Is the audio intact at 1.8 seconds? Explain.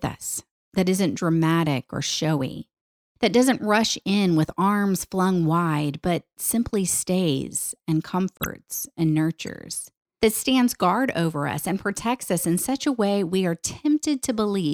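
Yes, the speech plays through 1.8 seconds without any dropout, click, distortion or other fault.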